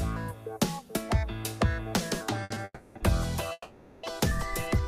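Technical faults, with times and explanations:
2.43–2.52 s, 2.54–2.58 s, 2.97–3.02 s: short stall from a late packet. The sound hangs on one moment for about 70 ms, 20 ms, then 30 ms, with a faint buzzy smear. Each time a packet was due but absent, so the jitter buffer emptied and the receiver stretched the last sound until the packet arrived and playback resumed where it left off.
2.64–2.97 s and 3.52–4.05 s: call audio freeze. The sound stops moving and becomes a held buzz that fades, lasting about 310 ms and then 510 ms, ending in roughly 30 ms of silence before playback picks up where it stopped. The likely cause is packets held up in transit, draining the jitter buffer and forcing the receiver to fill the wait, which pushes everything after it later.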